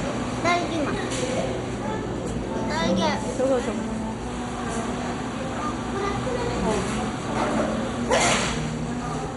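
From start to end the audio has nothing above 11.2 kHz and a gurgling, granular roughness, with upper bands flickering in and out. The cause is likely MP2 compression starved of bits, which fits a rate around 56 kbps, switching off sub-bands and coarsely quantising the rest.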